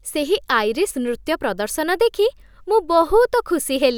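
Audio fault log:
Nothing stood out on listening to this speech clip.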